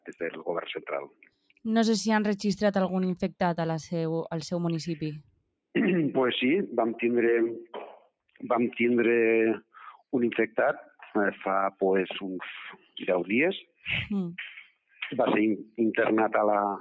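At 1.08–1.65 s, 5.22–5.5 s, 12.77–12.96 s, 13.63–13.85 s and 14.66–15.01 s, the noise suppressor mistakes sound for noise and cuts it by about 15 to 18 dB. Each cut is heard as a brief sinking in level. On the waveform, each shows as a sudden dip in the envelope, and on the spectrogram as a faded patch.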